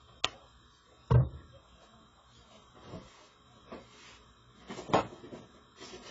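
From start to end, the sound is dull, with nothing above about 7.6 kHz. The damage is heavy. Sustained tones warble and bright detail turns fizzy and smeared. This is likely AAC compression at a low bitrate, near 16 kbps. The encoder lowered its cut-off.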